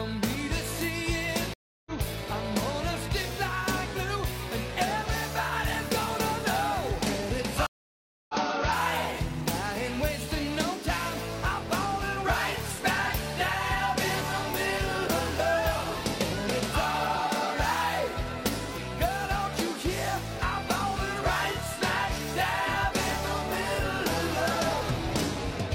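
At 1.54–1.92 s and again at 7.67–8.35 s there is a stream reconnect: the connection drops, about 0.32 s and then 0.62 s of silence follow, and a fresh decoder picks up mid-stream, fading in. Unlike a plain dropout, the sound resumes further along, skipping roughly 0.2 s and then about 0.4 s.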